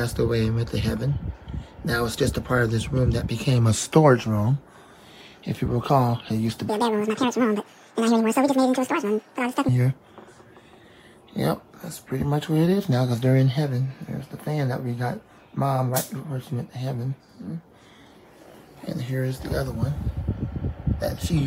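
Between 6.69 and 9.69 s the audio is read two samples at a time (double speed), so that stretch plays twice as fast and an octave higher.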